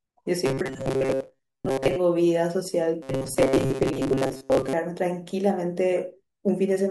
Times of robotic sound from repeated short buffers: 0.46-1.96, 3.02-4.73

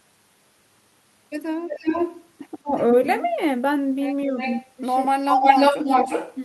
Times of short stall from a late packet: none

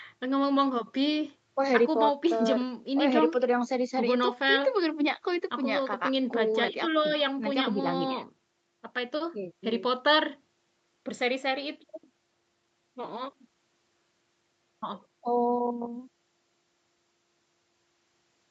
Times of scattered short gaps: none

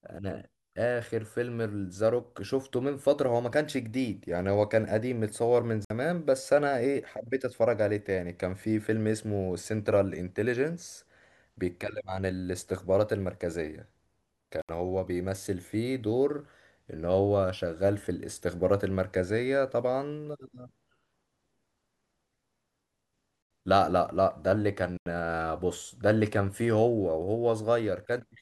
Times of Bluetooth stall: 5.85-5.90, 14.62-14.69, 23.42-23.51, 24.97-25.06

